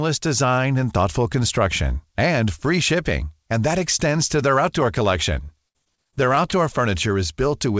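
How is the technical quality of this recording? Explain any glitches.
The recording has one clear glitch, heard through a wideband call path with nothing above 8 kHz, which fits a codec such as G.722.

From 5.44 to 6.54 s, just after "to their outdoor collection", repeated packet loss (robotic sound) sets in. About ten short holes, the longest around 58 ms, are patched by stretching the preceding sound. The result is choppy, with pieces missing. On a spectrogram, smeared, repeated frames interrupt the speech harmonics, and the waveform shows brief, looped segments.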